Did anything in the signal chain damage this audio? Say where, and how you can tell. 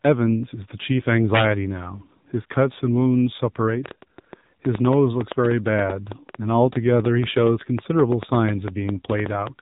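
Yes, on three counts. At the codec stage, AMR narrowband mobile coding removes everything above 3.8 kHz and leaves buzzy, synthetic speech, consistent with a low mode around 7.4 kbps.

There's also integer overflow in a gain or format-conversion step: violent cracks at 1.35–1.44 s, 5.45, 6.12, 7.05, 7.47 and 9.10 s. Peaks only up to about 2 dB over full scale wrapped sign instead of limiting.

Finally, a train of clicks runs from 3.86 to 9.48 s, irregular, around six a second and well above the speech. That's likely interference or a struggling interface upstream.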